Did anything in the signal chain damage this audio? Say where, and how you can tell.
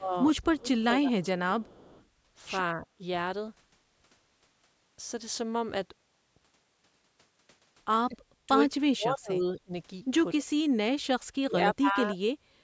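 Yes. Both faults come from the call processing stage, in the echo canceller of the side playing the call on a loudspeaker.

Speech suppressed in double talk shows up as the speech dipping at 0.00–1.39 s (by about 15 dB), 2.75–3.00 s (about 5 dB), 8.09–9.72 s (about 35 dB), 10.34–10.46 s (about 15 dB) and 11.07–12.22 s (about 40 dB). In the longer spans, only part of the time is pulled down. The likely mechanism is that the canceller could not tell its own talker from the loudspeaker echo and turned both down. A network dropout would cut the audio cleanly instead. These dips vary in depth and come and go within each span, which is how attenuation behaves.

Echo leak adds something rather than taking it away. At 0.42–0.53 s and again at 1.61–2.05 s, a delayed copy of one voice comes back about 234 ms late, at about 30 dB below the speech. This is likely residual echo that the canceller failed to remove from the microphone pickup, which was then sent back. 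A room reflection would arrive much sooner and would not stop and start like this.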